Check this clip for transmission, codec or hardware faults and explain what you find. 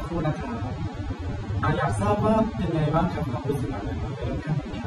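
One fault runs through the whole clip: AAC compression, most likely AAC-LC at a low bitrate, with damage that points to roughly 24 kbps. With so few bits for each frame, the encoder discards spectral detail its hearing model judges less important and cuts off the top band. Nothing remains above 15.1 kHz. The speech sounds dull and smeared, with a plainly audible warbling, fizzy texture on sustained sounds and sibilants.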